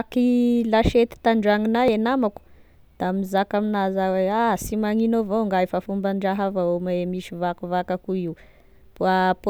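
At 1.88 s, the recorder likely lost a short piece while closing one 4-second chunk and opening the next, leaving audio missing between chunks. About 20 ms of speech is gone between "lasiety tandragnonah" and "e namako da mizaka", so the two sides join directly as a brief skip.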